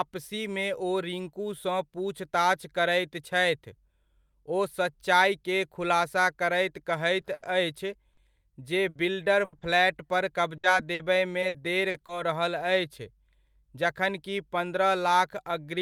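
From 7.21 to 12.12 s, just after "खुलासा करैत" and running up to "रहल अछि", the speech turns choppy, with small pieces dropping out. This is repeated packet loss (robotic sound). Audio kept arriving late or not at all, and each hole was patched by stretching the last sound forward. About 550 ms was filled this way and about 360 ms is simply missing. The longest single gap is 80 ms, and about 11% of the stretch is concealed.

From 13.60 to 14.77 s, just after "रहल अछि", the speech sounds slightly hurried while its pitch stays put, running at about 105% of normal speed. This is a jitter buffer speed-up. The receiver was holding more audio than it needed. To bring the delay back down, it cut out tiny slices of one or a few pitch periods in quick succession, roughly 70 ms in all.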